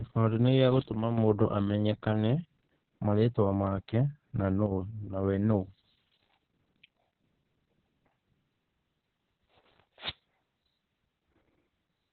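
Heavy Opus voice compression runs through the whole clip. There is nothing above 4.4 kHz, so the speech sounds muffled and telephone-like. The SILK coder renders the excitation coarsely, leaving a hoarse, slightly robotic texture. That fits a bitrate near 6 kbps.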